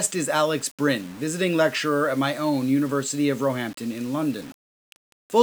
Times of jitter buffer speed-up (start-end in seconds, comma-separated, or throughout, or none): none